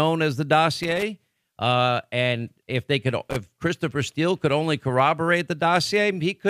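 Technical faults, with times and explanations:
0.83–1.03 s and 3.30–3.36 s, loose connector crackle: a worn or dirty contact in the signal path is making and breaking as it shifts, so the speech is chopped on and off many times within each burst, and any DC sitting on the line turns each break into a pop. The result is an irregular scratchy crackle, about 0.2 s long the first time and a shorter 60 ms flurry the second.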